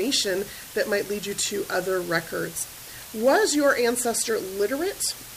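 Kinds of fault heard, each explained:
Low bit depth with dither: a steady, even hiss sits under the sound from start to finish, only about 15 dB below it, with no crunch or distortion. That fits very coarse rounding, around 5 bits, where added dither turns the quantization error into plain white noise.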